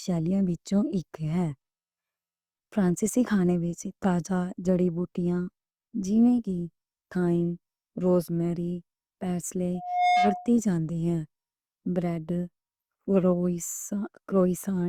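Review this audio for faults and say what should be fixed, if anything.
A loudspeaker feedback squeal runs from 9.74 to 10.55 s. A single tone at 721 Hz swells up in about a third of a second and ends up a few decibels louder than the speech. The microphone is hearing the loudspeaker it feeds. At 721 Hz the loop gain climbs past one, so that tone keeps growing on its own until the amplifier limits it or the loop is broken. To prevent it, lower the gain, move the microphone away from the loudspeaker, or notch out 721 Hz.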